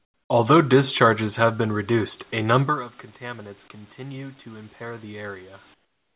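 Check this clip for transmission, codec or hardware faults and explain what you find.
Two kinds of fault turn up here: comfort noise standing in for the background at the start and end, and an automatic gain control pushing the level up in the middle. The whole clip is band-limited to nothing above 4 kHz, which fits a narrowband G.711 A-law call path.

Comfort noise in place of the background: For the first 0.3 s, and again from 5.74 s to the end, the real room background disappears and a flat, featureless hiss takes its place. It sits about 23 dB and about 17 dB below the surrounding background level, respectively. The likely cause is discontinuous transmission: the sender's voice detector hears no speech and stops sending, and the receiver fills the gap with synthetic noise in the style of RFC 3389. That is why the texture goes dead and quieter rather than simply dropping out.

Automatic gain rising: Just after "reduced a number of", from 3.19 s to 5.53 s, the voice and the background swell together by about 4 dB over a couple of seconds. 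The input had fallen by about 16 dB. You can hear the talker drift away from the mic around 2.5 s, and the AGC reacts by slowly raising its gain. The giveaway is that the noise floor climbs along with the voice, so this is a gain change in the system and not the talker getting louder.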